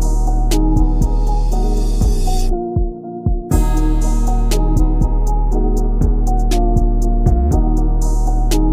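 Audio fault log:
No fault is logged for this clip.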